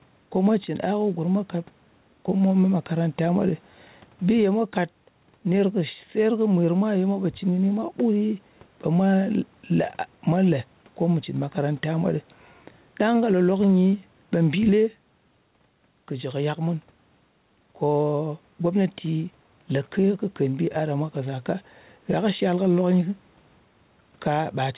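Gain pumping throughout: the background swells in pauses and ducks roughly 10 dB under loud moments, likely a fast limiter fighting overcranked gain.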